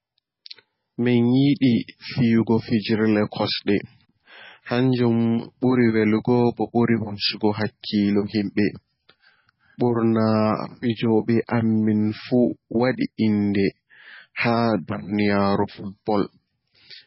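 From start to finish, the speech carries heavy damage of the kind left by MP3 compression, likely from encoding at a very low bitrate, around 16 kbps. Nothing sounds above 5.5 kHz, so the top is cut clean away. S sounds lose their edge and turn dull. Weak frequency lines drop in and out between frames. That gives a watery, swirling texture behind every word. Consonant onsets smear rather than strike.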